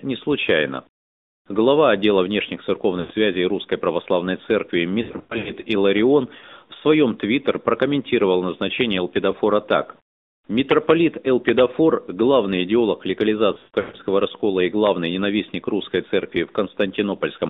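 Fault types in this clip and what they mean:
AMR narrowband mobile codec: speech squeezed through a mobile speech coder at 10.2 kbps, confined to roughly 200 Hz to 3.7 kHz; buzzy, synthetic timbre throughout, unlike simple band-limiting.
Lost AMR speech frames: corrupted frames replaced by stretched, fading repeats of the last good sound, at 3.0, 5.0 and 13.5 s; smeared dropouts rather than clicks or hard silence.
Integer overflow: a loud peak wrapped to the opposite sign around 11.5 s, just before "главный идеолог"; a violent crack, far sharper than ordinary clipping distortion.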